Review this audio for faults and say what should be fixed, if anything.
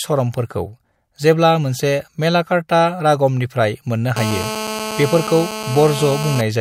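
GSM phone buzz, 4.17 to 6.41 s. A nearby phone on a call bursts 217 times a second. The audio circuit rectifies it into a steady rasp, about 8 dB below the speech. Keep phones switched off or away from the recording gear.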